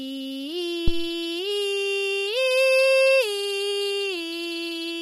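Throughout the music, plainly audible codec damage gives a rough, grainy texture, with noise filling the gaps between harmonics and a thin, synthetic-sounding top band. This is likely low-delay AAC compression, AAC-ELD, whose short frames smear pitch detail at a bitrate around 32 kbps. From 0.88 to 1.14 s a phantom power thump intrudes: a supply was switched on a live input, and the voltage step passed through the coupling capacitors as a deep thud decaying over about 58 ms.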